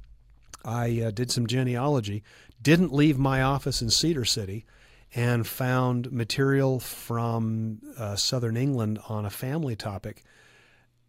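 From 0.11 to 11.04 s, clock slip clicks make a rattle, about twenty per second, likely from unsynchronised clocks; unlike random clicks, spacing stays even.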